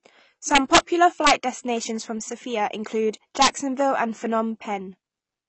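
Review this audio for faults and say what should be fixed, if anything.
Throughout, the speech sounds dull and smeared, with a warbling, fizzy edge on sibilants and nothing above 8.2 kHz. This is likely AAC compression at a low bitrate, which fits about 24 kbps. On a spectrogram there is a flat ceiling at 8.2 kHz, with patchy holes between bands. Encoding at a higher bitrate would keep the top band and fill those gaps.

Integer overflow produces violent cracks from 0.55 to 0.78 s (about 4 dB over the limit), from 1.27 to 1.31 s just before "destinations from" (about 3 dB), and from 3.42 to 3.47 s (about 3 dB). Each peak that goes past full scale wraps to the opposite sign. On the waveform this shows as vertical jumps from top to bottom, and on a spectrogram as broadband stripes. Saturating arithmetic or limiting before the sum would prevent it.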